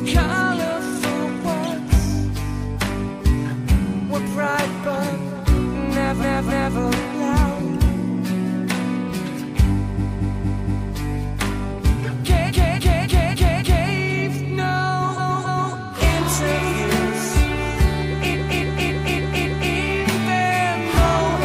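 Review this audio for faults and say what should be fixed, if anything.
Repeated frames at 6.20–6.76 s, 9.96–10.89 s, 12.47–13.86 s, 15.17–15.72 s and 18.32–19.72 s: a short block of encoded audio, about 0.28 s (0.23 s in the second), plays two to five extra times, so the sound stutters and each event adds 0.56 to 1.39 s. To fix this, make the writer or stream sender advance its read position only after a frame is confirmed, and drop any frame it has already sent.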